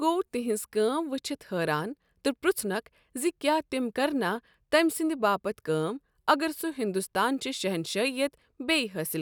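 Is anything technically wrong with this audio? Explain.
No, nothing is technically wrong with this audio.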